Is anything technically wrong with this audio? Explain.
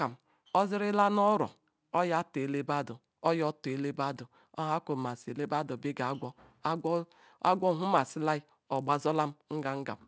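Yes. A 100 Hz buzz runs through the whole speech clip and drops away in pauses. It comes from a resampler restarted on every block: each 10 ms block was converted from 24 kHz to 16 kHz on its own, leaving a small error at every block edge.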